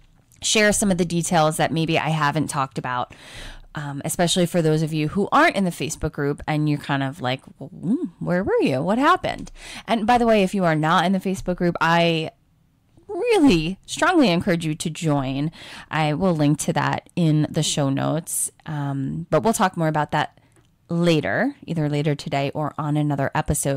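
Hard clipping runs through the whole speech clip. Some stage was driven about 8 dB beyond what it could pass, so roughly one or two percent of the waveform had its peaks sliced flat. Those flattened tops add high harmonics, heard as distortion on the loudest syllables.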